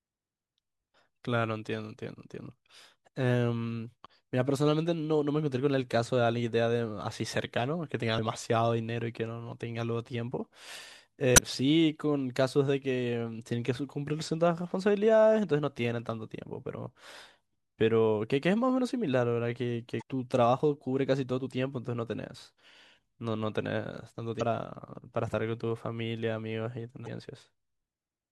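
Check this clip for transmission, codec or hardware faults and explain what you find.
There's one kind of fault here, damaged data in a compressed stream, showing up five times in this speech: at 8.17 s, then 11.34–11.38 s, 19.98–20.02 s, 24.37–24.41 s and 27.04–27.08 s. Each is a short glitch of roughly 16 to 42 ms. Bad bytes in the encoded stream mean the decoder can't read those frames properly, loses its place and resyncs on the next valid frame header, leaving that brief glitch.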